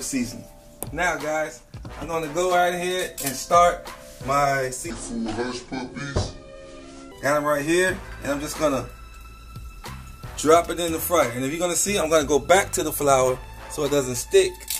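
From 4.90 to 7.12 s, a section at the wrong speed plays at 0.69x, likely from a clock mismatch. It drops about seven semitones and slows together, unlike pitch-shifting.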